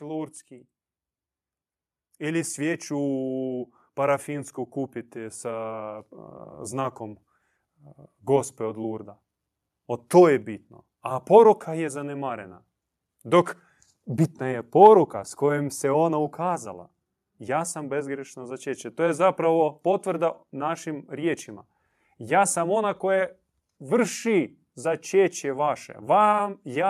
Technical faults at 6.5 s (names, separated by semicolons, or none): automatic gain rising